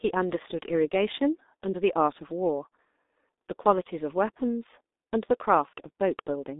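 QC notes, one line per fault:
Throughout: G.723.1 codec. The speech is squeezed into a telephone band of about 250 Hz to 3.7 kHz, and nothing is heard above 3.8 kHz. That removes the air and sibilance, so the sound is muffled. At 6.3 kbit/s the codec rebuilds the voice from a coarse model updated every 30 ms frame. The heavy coding damage makes the tone hoarse, and consonants smear into the vowels around them.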